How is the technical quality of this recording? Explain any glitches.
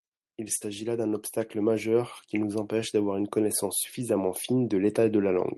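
The recording has one clear glitch, a burst of packet loss early in the speech. From 0.55 to 0.64 s the sound stalls into a held, fading buzz or hiss, then jumps ahead abruptly. A short run of packets failed to arrive in time, so the receiver stretched the last sound it had for about 57 ms while turning it down. When the audio resumed, about 40 ms of speech had been skipped, and the timing shifted by about 17 ms.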